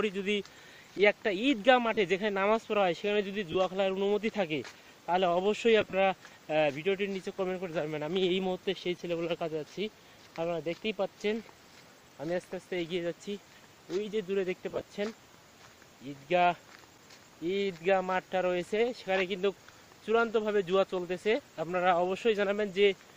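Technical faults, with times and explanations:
1.94–1.97 s, 3.52–3.55 s, 5.81–5.93 s and 14.70–14.87 s, lost LE Audio frames: the LC3 decoder fills the gaps (about 30 ms, 22 ms, then 60 and 68 ms scattered in short bursts) by repeating the last spectrum with random signs. Tonal lines smear into noisy vertical patches on a spectrogram, and the waveform looks briefly rough.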